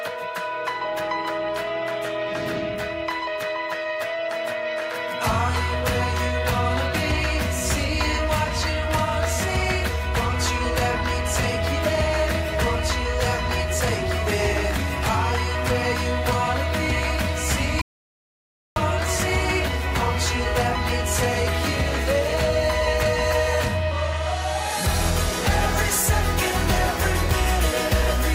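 At 17.82 s the sound cuts out abruptly and returns at 18.76 s, leaving about 0.95 s of silence with no room tone. This is an audio dropout to silence, likely from the input being lost while the recorder kept writing silence.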